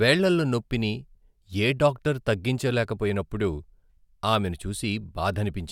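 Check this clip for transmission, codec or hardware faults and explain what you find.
No faults can be heard anywhere in this speech recording. There is nothing here that needs further explanation.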